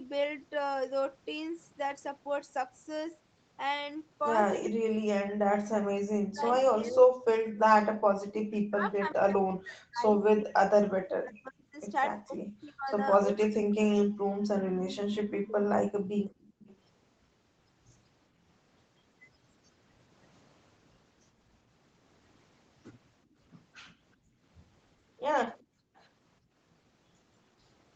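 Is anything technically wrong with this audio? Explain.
Yes. Echo-canceller trouble shows up in three ways, all within an 8 kHz band.

Speech suppressed in double talk, from 4.68 to 15.65 s and briefly at 25.66 to 25.70 s: the speech dips by up to roughly 40 dB for about seven seconds in total. This is likely because the canceller cut both sides while they overlapped. Unlike gating, the speech itself drops, not just the room sound.

Echo leak, from 6.4 to 9.13 s, 14.95 to 16.77 s and 25.59 to 26.03 s: a copy of the speech trails it by 381 ms. It is likely a loudspeaker's residual echo returning, strong at first and faint later. The fixed delay distinguishes it from reverb.

Background gated by the echo canceller, from 7.92 to 8.07 s, 16.0 to 16.29 s and 24.16 to 26.56 s: the room tone drops by about 37, 22 and 23 dB, then recovers. This comes from hard microphone suppression during playback, which affects the background rather than the speech.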